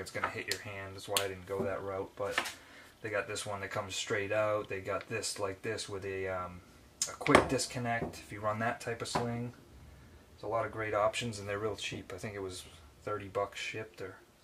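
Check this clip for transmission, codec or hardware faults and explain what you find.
Nothing stood out on listening.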